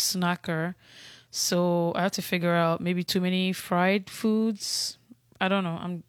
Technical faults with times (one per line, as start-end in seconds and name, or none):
none